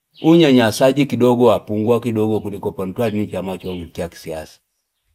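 Nothing stood out as a technical problem on listening to this speech recording.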